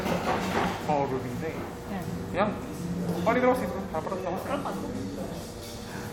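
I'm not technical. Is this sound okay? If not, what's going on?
Yes, it's fine: nothing in this sound stood out as a problem when I listened to it.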